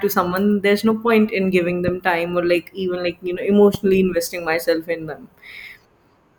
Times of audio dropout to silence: none

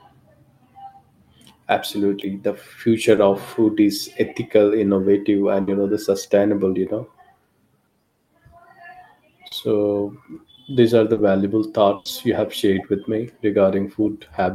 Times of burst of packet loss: 5.61-5.69, 11.95-12.07

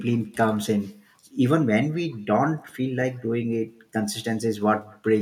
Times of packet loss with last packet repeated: none

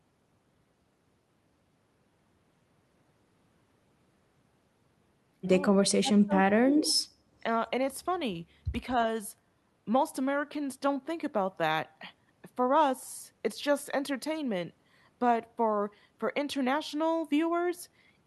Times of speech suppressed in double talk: 5.99-7.04

